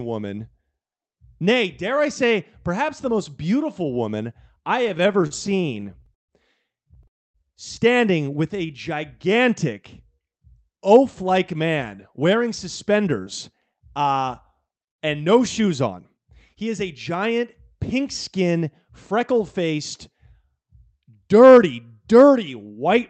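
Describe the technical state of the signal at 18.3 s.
At 18.3 s the speech is intact, with no dropout, glitch or distortion, only the steady coding character of the Opus call path, whose top end stops at about 8 kHz.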